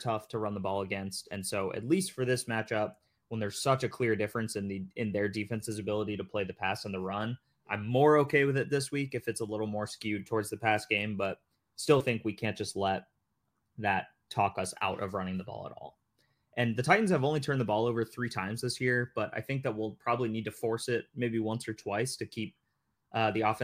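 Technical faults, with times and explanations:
Nothing stood out as a technical problem on listening to this speech recording.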